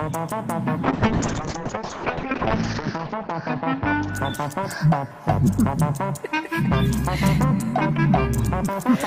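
From 0.85 s to 4.43 s a call bitrate drop makes the sound rough and muffled, which fits a fall from 32 to 6 kbps, worst for 1.77 s. On a spectrogram, energy above 8 kHz vanishes, then returns.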